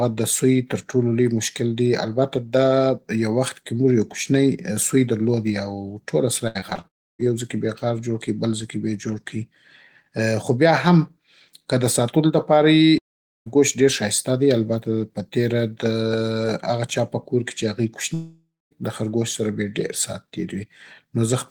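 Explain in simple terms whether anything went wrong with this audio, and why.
The speech breaks up from 6.47 to 6.85 s, just after "او ټوله". This is repeated packet loss (robotic sound): five short holes, the longest 74 ms, are each patched by stretching the previous sound. About a third of that stretch is filled-in guesswork, so it sounds choppy.

Three longer holes follow: 6.87 to 7.25 s, ending at "يو ځي کې بې"; 12.98 to 13.48 s, before "ډېر ښايسته دی البته"; and 18.14 to 18.77 s. Each starts with a fading buzz or hiss, then silence, and speech returns with a piece missing. The likely cause is a long network dropout.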